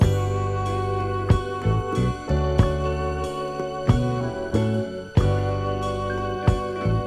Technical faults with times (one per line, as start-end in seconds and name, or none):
none